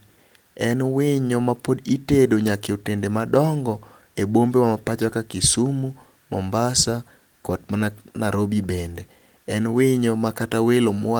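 Nothing stood out on listening to this speech recording; no technical problems could be heard at any point.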